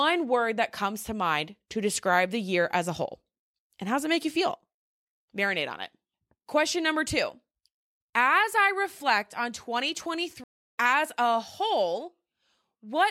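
At 10.44 s the speech cuts to 330 ms of silence, resuming at 10.77 s on "as a" roughly a third of a second further along. This is a stream reconnect: the connection dropped, and the player restarted its decoder at a later point.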